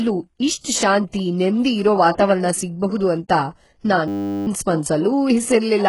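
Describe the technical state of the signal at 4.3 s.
At 4.3 s the signal sits inside a system hang loop running from 4.08 to 4.47 s. The computer or driver stalled while the audio hardware kept replaying the same ring buffer, so one 10 ms slice of sound repeats exactly, 39 times. Because the loop is so short, it comes across as a steady buzz at 100 Hz rather than a stutter, and about four tenths of a second of the real audio is lost in its place.

Underneath the loop, heavy coding damage is present here as through the whole clip, with nothing above 11.5 kHz and treble that does not belong to the original. It is likely HE-AAC compression at a rate that fits about 12 kbps. That codec keeps only the lower band and synthesises the top by copying lower bands upward under a coarse envelope, so harmonics fail to line up across the crossover and sibilants turn gritty, metallic or lispy.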